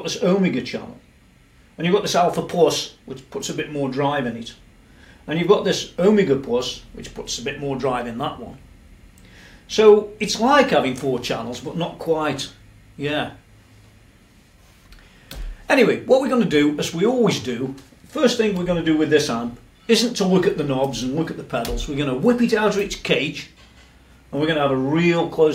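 No technical faults are audible anywhere in the recording.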